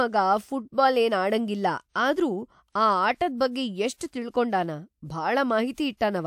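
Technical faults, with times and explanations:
2.70–2.75 s and 5.74–5.78 s, pre-echo: just after "ಆಡಂಗಿಲ್ಲ ಆದ್ರೂ", and again near the end, a short hiss leads into a sharp onset, lasting about 54 ms the first time and 38 ms the second. The codec sized its quantisation noise for the loud attack but spread it across the whole transform block, so the quiet stretch before the onset is filled with that noise. Each attack therefore sounds softened and smeared rather than crisp.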